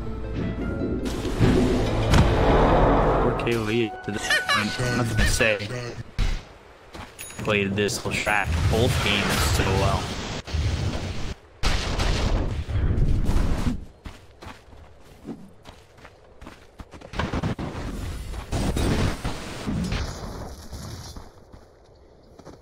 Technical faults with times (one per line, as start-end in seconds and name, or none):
20.00-22.62 channel delay (comb filtering)